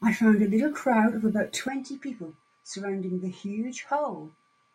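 Speech. At 1.68 s the sound abruptly drops about 10 dB and turns duller, with nothing above 9.4 kHz. A low noise floor appears. This is likely an input switched to a poorer device.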